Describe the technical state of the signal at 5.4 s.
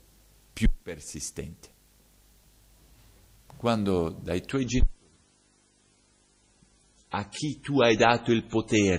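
At 5.4 s the top end is gone above 10.4 kHz and codec artefacts increase, within a sudden, gapless quality drop running from 4.51 s to the end. This is an adaptive stream at a lower bitrate, consistent with a switch from 128 to 24 kbit/s MP3 after the connection slowed.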